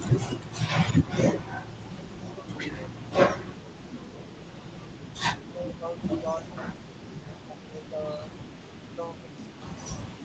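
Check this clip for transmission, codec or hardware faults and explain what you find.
Two faults run through the speech: a faint trailing echo of the voice, and repeated dips where the voice is pushed down.

Echo leak, from 0.13 s to the end: a quiet second copy of the voice trails the original by 349 ms, sitting roughly 25 dB below it, so it sounds like a faint shadow behind each phrase. The likely cause is a loudspeaker on the far side whose echo canceller let part of what its microphone caught pass back into the call.

Speech suppressed in double talk, at 1.41–1.46 s, 2.32–3.11 s, 3.66–4.69 s, 5.51–6.66 s, 7.2–8.32 s and 8.95 s to the end: the voice sags by around 10 to 15 dB and loses presence in patches. The brief one at 1.41 s is a short blip, while the later ones last from about half a second to a second. This likely comes from an echo canceller that, hearing both sides at once, could not tell its own talker from returning echo and turned both down. 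The audio is limited to 8 kHz, consistent with Opus at 32 kbps in the call path.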